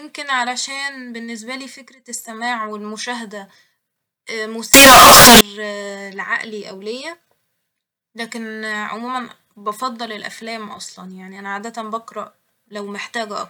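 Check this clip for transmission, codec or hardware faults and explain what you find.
There is one fault, a float read as integer, from 4.74 to 5.41 s. For that two-thirds of a second the speech turns into a loud, harsh, near-square buzz at an almost fixed, high level. Background noise rises to the same level as the speech. Pitch stays traceable. The likely cause is 32-bit float samples being read as 32-bit integers. Each sample's sign and exponent bits then set its level, regardless of the original loudness.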